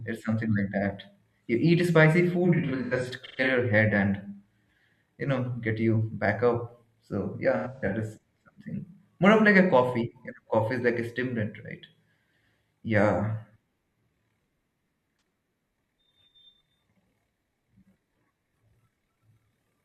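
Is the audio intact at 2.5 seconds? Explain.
No. AAC frame loss with concealment runs from 2.44 to 3.48 s, between "eat spicy" and "your head and". About 512 ms of frames drop out in gaps up to around 150 ms. The decoder patches them from the last good spectrum, giving smeared, noisy, phasey patches.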